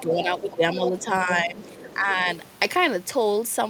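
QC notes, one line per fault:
0.04–2.28 s, speech suppressed in double talk: the speech level dips repeatedly, by up to roughly 10 dB, over about a second and a half in total. This is likely an echo canceller treating overlapping far-end and near-end sound as echo and attenuating both.
0.50–0.57 s and 1.63–1.97 s, other side's voice leaking through: a second, fainter voice sits roughly 20 dB below the speech, briefly at first, then for about a third of a second. This is likely residual loudspeaker echo left in the microphone signal.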